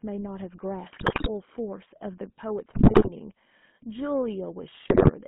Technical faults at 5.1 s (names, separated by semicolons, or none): GSM full-rate codec; GSM bit errors